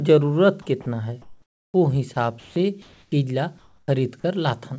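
Between 0.62 and 0.86 s, the sender's voice detector likely kept switching transmission off and on, producing sound chopped by the voice detector. About 80 ms of real signal in that stretch is replaced by comfort noise, so the speech comes through choppy.

From 1.22 to 1.74 s, the sender likely stopped transmitting during a pause, and the receiver generated comfort noise in place of the background for the full 520 ms. The real ambience, sitting about 49 dB below the loudest speech, turns into a flat, detail-free hiss roughly 5 dB quieter. At the end of that gap, 1.71 to 1.74 s, the detector was likely late to register the returning speech. The first 30 ms are lost to comfort noise, the onset clipped by the voice detector, so the sound starts abruptly with no soft attack.

A second stretch of chopping, likely from the same detector switching, runs from 2.14 to 2.56 s, with about 180 ms swapped for synthetic fill and a choppy, unsteady texture.

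The pattern repeats twice more. From 2.82 to 3.12 s comfort noise replaces the background, likely during a transmission pause, only about 2 dB quieter and so a subtle flattening. The onset that follows, 3.10 to 3.12 s, loses 20 ms. From 3.58 to 3.88 s the substitute noise is about 15 dB quieter than the real background. At 3.82 to 3.88 s, 60 ms of the next onset is clipped, the longest onset cut in the clip.

All of this passes through a call codec that leaves nothing above 8 kHz, consistent with G.722.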